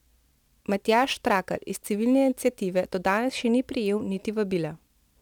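From the start to 3.18 s the speech carries a gritty, inharmonic fizz that rises with louder and brighter syllables. This is crude rate conversion: samples were simply repeated to stretch the rate, which fits a 44.1 kHz to 48 kHz change, leaving unrelated error tones about 25 dB down.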